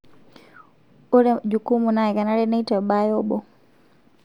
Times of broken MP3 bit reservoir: none

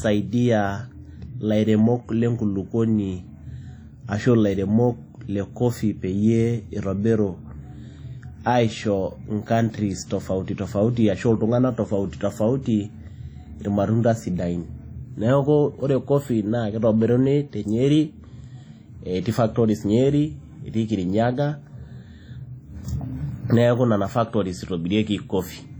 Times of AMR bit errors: none

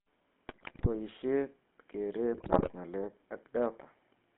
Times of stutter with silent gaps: none

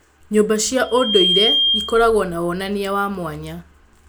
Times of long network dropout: none

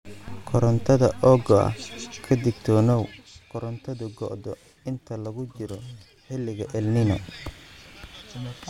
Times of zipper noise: 2.89-3.42, 6.54-7.11

